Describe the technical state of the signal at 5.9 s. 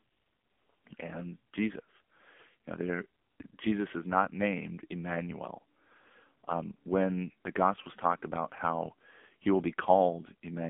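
At 5.9 s the speech carries AMR narrowband mobile codec damage, present across the whole clip. Heavy vocal-tract modelling with sparse pulse excitation gives a buzzy, synthetic tone, which fits a low mode near 6.7 kbps, inside a 200 Hz to 3.5 kHz band with nothing above 3.6 kHz.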